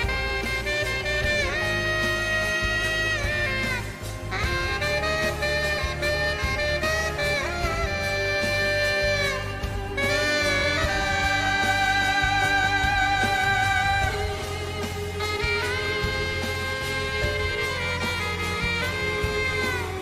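No technical fault can be heard anywhere in this recording. There is nothing in the sound that calls for a timestamp or an explanation of a cause.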